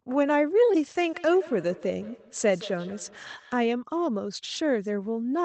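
From 0.98 to 3.68 s there's feedback echo between two devices. A second device in the room replays the call and its mic sends it back, beyond either echo canceller's reach. Words return roughly every 150 ms, thin and ringing, peaking about 20 dB below the speech.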